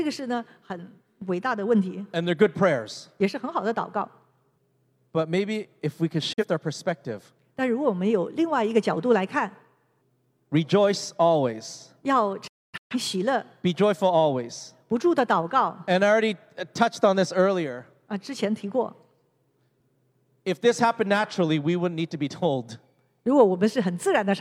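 Digital broadcast dropouts at 6.33 s, after "maybe if we could", and 12.47 to 12.96 s, after "rejoicealways要": the receiver lost frames and muted, briefly at first, then in scattered holes totalling 384 ms.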